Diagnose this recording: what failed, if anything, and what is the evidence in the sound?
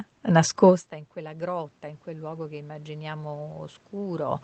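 Automatic gain rising, in call processing. Just after "nascosta in", at 1.14 s, the input level drops by about 21 dB. From there to the end the speech and room noise swell together as the gain control gradually ramps up to compensate.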